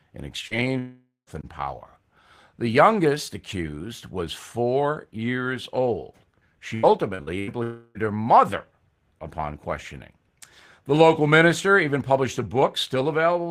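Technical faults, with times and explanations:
0.47–0.54 s, short concealed packet loss: about 40 ms of speech was lost and patched by extending the preceding sound, leaving a brief smear; the spectrogram shows a smoothed, repeated stretch.
0.79–1.30 s, long network dropout: the sound trails off as a fading buzz or hiss, with about 140 ms of near-silence before "and power" resumes. This is likely a network outage, and the waveform shows a decaying envelope and then a flat gap.
6.75–7.50 s, repeated packet loss (robotic sound): four separate gaps, the longest 83 ms, were each filled, so about a third of this stretch is synthetic. It sounds choppy, with striped, repeated spectral frames.
7.63–7.98 s, long network dropout: about 320 ms is replaced by a continued, fading buzz or hiss with no true silence before "her mother upon questioning". The likely cause is a network stall. The waveform shows a smooth, shrinking stretch without real speech detail.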